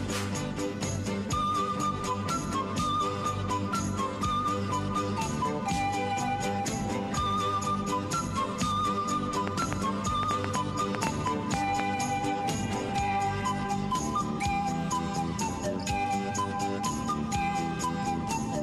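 A train of clicks runs from 9.48 to 11.81 s, around fifteen unevenly spaced pops at about 5 per second, peaking roughly 20 dB over the sound, likely interference or a faulty connection or power supply.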